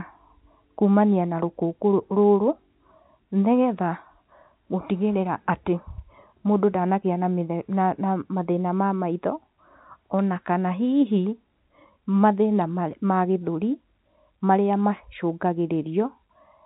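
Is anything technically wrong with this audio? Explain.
No, nothing's wrong here; it's simply speech carried over ordinary G.711 telephone coding, so the top end stops at around 3.9 kHz the way a regular phone line does.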